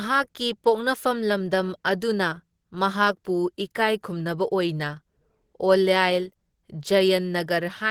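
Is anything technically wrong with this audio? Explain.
Yes. Throughout the speech there is plainly audible Opus compression, likely from an encoder running at a rate that fits about 16 kbps in its hybrid speech mode. The voice sounds hoarse, grainy and muffled. The band is still filled up to about 20.2 kHz, so this is not a simple treble cut-off, and there is less swirling than MP3 would cause.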